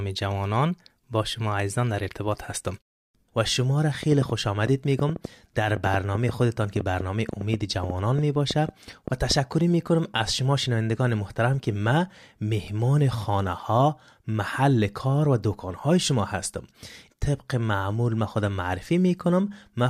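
From 4.03 to 9.32 s, a train of clicks ticks over the speech. About thirty pops arrive unevenly, roughly 5.1 per second, standing well above the voice. Likely interference from nearby equipment.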